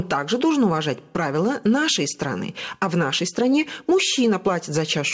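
Throughout the speech, the gain swings by roughly 10 dB as loud and soft parts are pulled closer in level, leaving the sound squashed. This is gain pumping, likely from input gain set far too high, with a fast limiter clamping each peak. The call codec also cuts off everything above 8 kHz.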